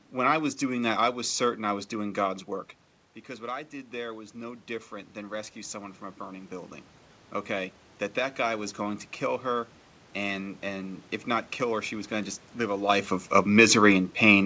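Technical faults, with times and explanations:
3.26–6.79 s, automatic gain rising: after the input fell about 12 dB, gain crept up about 7 dB, swelling voice and room noise together, unlike a talker moving.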